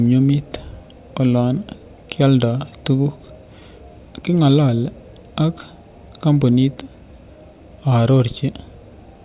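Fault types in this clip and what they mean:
No technical faults can be heard, and the signal stays continuous and stable across the whole clip.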